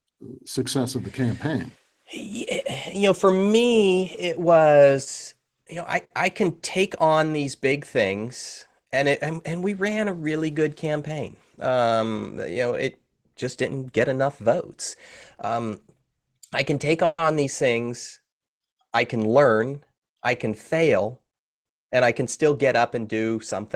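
At 17.05 s, between "I can take" and "these things", the speech stalls for 0.15 s: a fading buzz continues the last sound for about 130 ms, then 40 ms of silence. This is a call audio freeze, likely from delayed packets draining the jitter buffer, with the speech resuming intact and simply pushed later.

From 19.16 to 21.09 s the speech sounds slightly hurried at unchanged pitch, running at 106% speed. This is a jitter buffer speed-up: to shrink excess buffered delay, the receiver snipped out many pitch-period-sized slices, removing roughly 150 ms in total.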